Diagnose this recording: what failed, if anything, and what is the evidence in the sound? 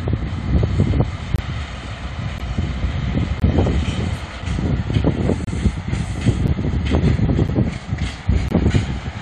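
Hard-edged silent holes of about 5 to 28 ms break the sound once a second, at 1.36–1.39, 2.38, 3.40–3.42, 4.42, 5.45–5.47, 6.47, 7.48 and 8.49–8.51 s. These are gaps between stream segments at the playback stage: the 1-second segments' timestamps don't quite meet, and the player pads each gap with silence, so nothing is lost.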